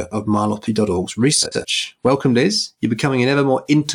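From 1.43 to 1.65 s, frames arrive out of order: two neighbouring blocks of about 93 ms swap places, so the speech jumps ahead then back, a garbled flutter. A spectrogram shows abrupt vertical seams there, with no time lost.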